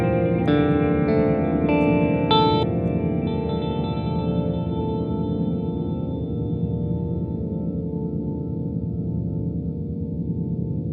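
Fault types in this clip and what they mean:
No technical faults can be heard anywhere in this audio.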